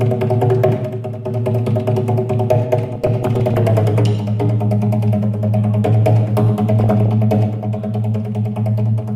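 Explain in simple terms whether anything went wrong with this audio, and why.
Weak digital radio reception let errors slip into the audio data, causing DAB burbling: short blips of noise from 2.92 to 3.58 s and from 6.80 to 7.10 s.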